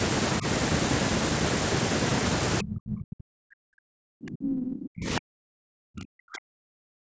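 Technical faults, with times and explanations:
2.62–7.16 s, speech suppressed in double talk: from here to the end the speech keeps dipping and breaking up, at its deepest by roughly 40 dB, over about four seconds in total. Likely the echo canceller hearing both sides at once and pulling everything down together.
5.40–5.54 s, playback stall: the sound stops dead for about 130 ms mid-flow, then picks back up. That gap is most likely the player running dry or its thread getting blocked, so nothing reached the output until it caught up.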